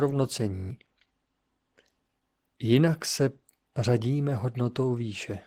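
Opus voice compression at 16 kbps runs throughout: the hybrid coder keeps full bandwidth, but coarse excitation makes the speech hoarse and faintly robotic, unlike simple low-pass muffling. From 0.56 to 0.70 s a system hang loop repeats one 21.33 ms slice seven times, which fits a 1024-sample buffer. The result is a steady 46.9 Hz buzz with about 150 ms of speech lost, identical cycles rather than a silent dropout.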